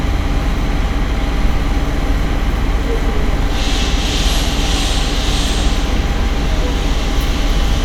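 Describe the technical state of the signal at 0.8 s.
At 0.8 s the audio is intact, with no fault of any kind present at that moment.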